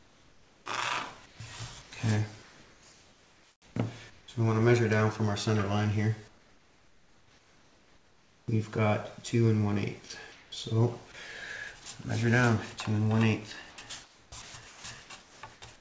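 From 0.00 to 0.66 s, the background is a steady, featureless hiss, about 6 dB quieter than the real room tone and sitting some 31 dB below the loudest passages. It returns from 1.26 to 4.28 s, from 6.28 to 8.48 s (again about 6 dB down) and from 10.08 to 10.52 s. This is comfort noise in place of the background. The sender likely stopped transmitting during the pauses, and the receiver filled them with synthetic noise shaped only roughly like the original.

At 10.08 s and again at 11.84 s, a tiny sliver of sound, about 10 ms, vanishes into that same smooth noise before the audio resumes. These are sounds dropped by the voice detector. A quiet sound was likely judged to be background, so transmission paused for a moment and comfort noise covered the gap.

From 13.70 to 15.62 s, the audio turns choppy. Roughly a second of material in total drops in and out. This is sound chopped by the voice detector: the detector likely toggled between sending and muting more than once over the stretch, replacing quieter fragments with comfort noise. 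Throughout, nothing is heard above 8 kHz, which fits a wideband call codec on the transmission path.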